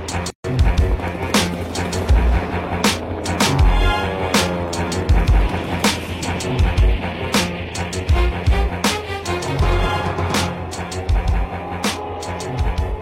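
At 0.30 s the sound drops out into silence and resumes at 0.44 s, a hole of about 142 ms with softened edges, after which it picks up exactly where it left off. This is a gap at a join of encoded pieces: the audio was encoded in separate segments and spliced without trimming, so the encoder's start-up delay and the padding on the final frame stayed in as dead air.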